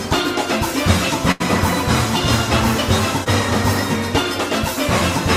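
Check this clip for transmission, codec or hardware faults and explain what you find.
Two transmission faults are audible, both losses in the packet stream that the receiver had to paper over.

Burst of packet loss, 1.31 to 1.42 s: a run of packets failed to arrive in time, leaving roughly 80 ms of audio with nothing to decode. The receiver extended the last sound it had for about 84 ms, fading it as the gap went on, so the audio turns into a held, dimming tone or hiss. It then picks up again further along, with that stretch simply gone.

Short concealed packet loss, 3.24 to 3.28 s: here only about 20 ms went missing. The decoder bridged the hole by continuing the preceding sound for around 20 ms, then blended back into the real signal. Because the patch is so brief, it comes across as a small smear or wobble rather than a clear dropout, and a very short sound at that point may be lost.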